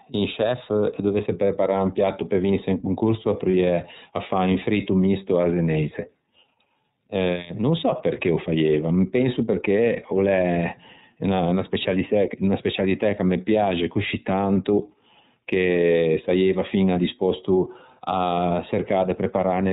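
Throughout, the speech passes through the iLBC codec, whose plainly audible damage fits its 13.33 kbps, 30 ms frame mode. Each frame's excitation is coded independently and nothing above 4 kHz survives, so the speech sounds muffled, slightly rough and synthetic.

From 3.51 to 3.54 s, lost iLBC frames leave a 30 ms gap, which fits a single missing frame. The decoder repeats the last pitch cycle mixed with noise, giving a brief buzzy, held vowel before the speech snaps back.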